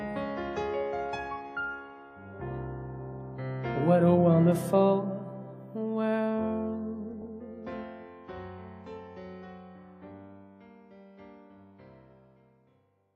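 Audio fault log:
3.13 s and 7.13–7.27 s: DAB burbling. Weak reception let bit errors slip past error correction into the MP2 audio data. Corrupted samples or scale factors inject brief noise or level jumps into individual sub-bands. The damage is consistent with a bit error rate of around 0.2 percent.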